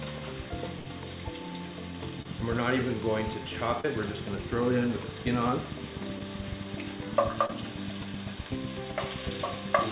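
At 0.79 to 0.86 s there is a burst of packet loss. Roughly 60 ms of audio never arrived. The receiver filled the hole by extending the last sound for about 62 ms and letting it fade, so it comes across as a short held buzz or decaying hiss. The sound then picks up further along, and the stretch in between is simply gone.

From 2.07 s to the end runs a train of clicks. Sharp, near-identical pulses arrive at a steady 7.9 per second, peaking around 10 dB above the surrounding sound. They tick over everything, gaps included, and the even spacing and constant shape point to a periodic disturbance, likely interference from nearby equipment or a faulty connection or power supply.

Four short concealed packet losses fall inside that stretch: 2.22 to 2.26 s, 3.81 to 3.85 s, 6.19 to 6.21 s and 7.46 to 7.50 s. In each, a few hundredths of a second failed to reach the decoder, about 30 ms for three and 10 ms for the one at 6.19 s. 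The decoder bridged the gap by carrying the previous waveform forward, as pitch where voiced and shaped noise where not, then crossfaded into the real signal. Each is heard as a brief smear or wobble, and a short sound can drop out entirely.

All of it sits inside a call-band signal with nothing above 4 kHz, consistent with G.711 mu-law at 64 kbps.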